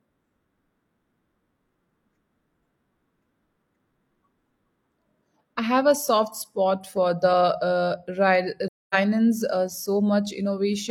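At 8.67 s the speech fades to silence and returns at 8.95 s, a soft-edged gap of about a quarter second. This is AAC frame loss with muting: the decoder zeroed the missing frames, and the overlapping windows taper the edges, consistent with roughly six lost frames.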